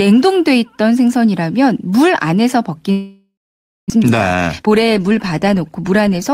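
Speech, with a long network dropout likely from 2.91 to 3.92 s: the last sound smears into a fading buzz, then about 0.54 s of silence. Unlike a brief glitch, 0.6 s is simply gone. A jitter buffer speed-up follows from 3.95 to 6.30 s, playing at 115% speed to shed roughly 0.4 s of backlog. Pitch stays unchanged, unlike a faster playback rate.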